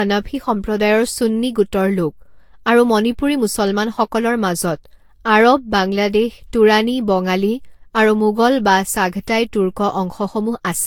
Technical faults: generation loss

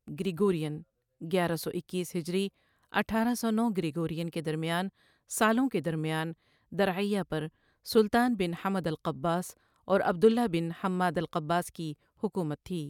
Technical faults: none

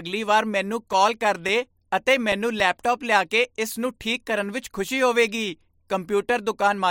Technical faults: CD scratch ticks

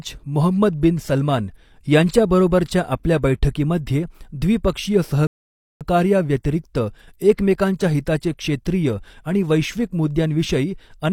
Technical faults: rebuffering stall

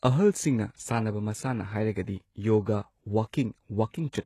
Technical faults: HE-AAC compression

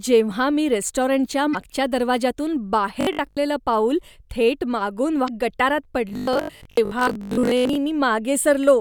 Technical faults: damaged data in a compressed stream; robotic sound from repeated short buffers

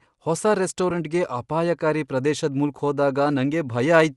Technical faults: Bluetooth LC3 compression; lost LE Audio frames

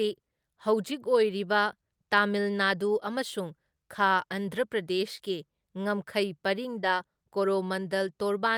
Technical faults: short concealed packet loss

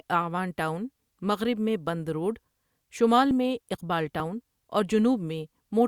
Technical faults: dropped buffer (overrun)

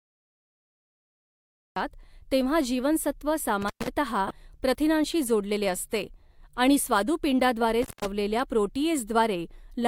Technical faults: cut-off start; intermittent contact; corrupt frame decoded

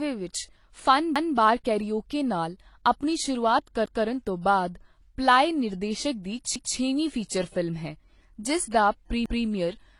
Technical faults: transcoding between lossy codecs; overlapping chunks

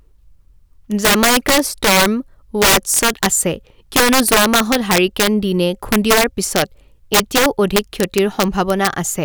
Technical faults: integer overflow

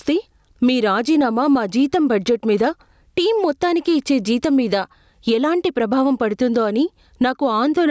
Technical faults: gain pumping

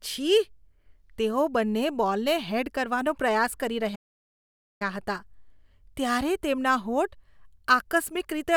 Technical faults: playback stall

